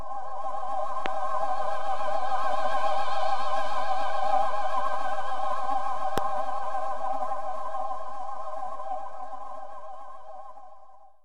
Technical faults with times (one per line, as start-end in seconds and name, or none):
1.06-1.08 loud pop
6.18-6.20 loud pop